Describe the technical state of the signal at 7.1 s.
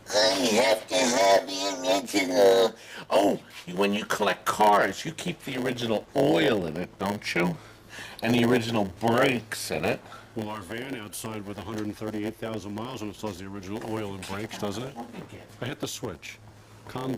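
At 7.1 s, as throughout the clip, a block size mismatch (padded) is present: one stage delivers blocks about 8% shorter than the next expects, and zeros fill each remainder. This leaves a 100 Hz buzz and plays the sound at 0.919 speed, pitch roughly unchanged.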